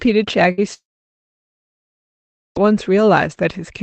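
At 0.51 s the last sound of the speech is briefly held and fades over roughly 60 ms, and at 0.60 s the talker picks up slightly further along, as if a sliver of the sentence had been clipped out. This is a burst of packet loss. A run of packets never made it in time, so the receiver stretched the last sound to cover the gap and then skipped ahead, leaving about 60 ms of speech unheard.

From 0.74 s the last sound is again held and fades, then falls to near silence that lasts roughly 1.7 s before speech returns at 2.57 s, well past where it left off. The most likely cause is a long network dropout. Nothing arrived for about 1.8 s, so the receiver's concealment could only extend the last fragment briefly before giving way to silence, and that whole stretch of speech is gone. Throughout, the call codec adds its usual coding noise, and high frequencies stop around 8 kHz.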